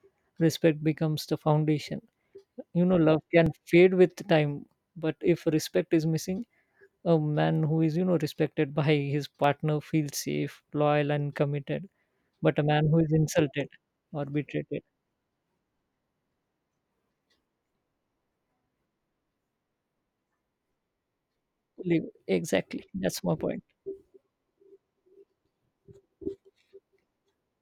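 At 3.46 s and 9.44 s the speech skips abruptly, about 20 ms vanishing each time, six seconds apart: likely audio missing between chunks, lost at recording boundaries.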